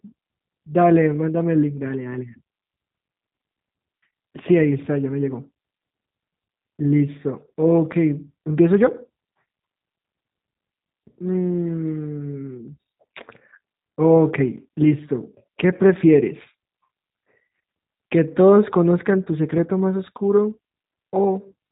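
G.729 coding runs throughout: speech is rebuilt from a vocal tract filter and sparse pulses at a rate that fits 8 kbit/s, so it sounds band-limited, rough and plainly synthetic.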